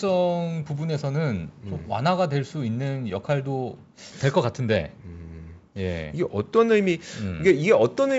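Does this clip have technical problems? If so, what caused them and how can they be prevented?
No, this clip has no technical problems, so there is nothing to prevent.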